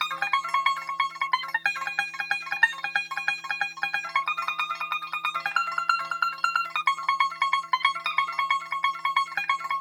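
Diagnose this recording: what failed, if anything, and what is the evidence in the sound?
Wrong sample rate throughout, at playback: sound runs 2.76 times fast and 17.6 semitones high, which fits 16 kHz samples played unconverted at 44.1 kHz.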